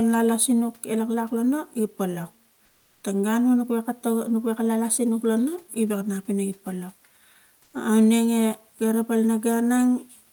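From 2.65 to 3.03 s and 7.63 to 7.73 s, comfort noise replaces the background, likely from discontinuous transmission. The room's detail gives way to flat synthetic hiss, about 4 dB and about 1 dB quieter.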